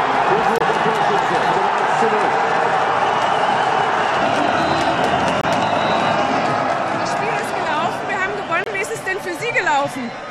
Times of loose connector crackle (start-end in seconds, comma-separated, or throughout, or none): none